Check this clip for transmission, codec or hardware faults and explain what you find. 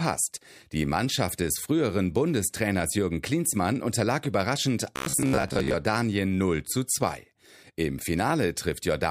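One fault appears, a stretch of robotic sound from repeated short buffers from 4.96 to 5.74 s, right after "unterlag überraschend". The speech becomes a rigid, metallic buzz at 66.7 Hz that still loosely tracks the words. That pitch fits a 15 ms fragment being looped, most likely because audio arrived too late and the gap was filled by replaying it, with roughly 70 percent of the stretch repeated. A spectrogram shows evenly spaced harmonics at 66.7 Hz intervals, and the waveform shows identical 15 ms cycles.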